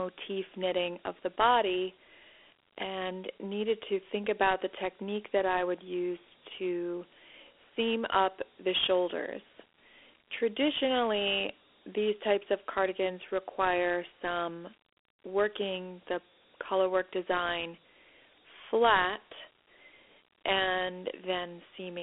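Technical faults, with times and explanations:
Throughout: Dialogic VOX ADPCM. The speech sits in a telephone band of 300 Hz to 3.4 kHz, with nothing above 3.7 kHz, and a plainly audible gritty hiss follows it. Coarse 4-bit adaptive steps cause the grit, at a rate that fits 32 kbps.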